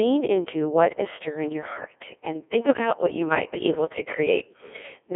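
Speech that has passed through a Codec 2 vocoder for its whole length, sounding robotic and buzzy, with heavy damage and nothing above 3.6 kHz in a 300 Hz to 3.5 kHz band. The voice is rebuilt from sine waves using only pitch, voicing, energy and envelope, which fits a 1.6 kbit/s mode.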